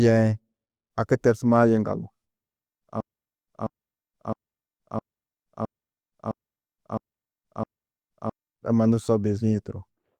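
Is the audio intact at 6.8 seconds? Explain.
No. From 3.01 to 8.33 s a broken-record loop repeats a 0.66 s fragment eight times, likely a stalled player resending its last buffer, seen as identical tiled blocks on a spectrogram.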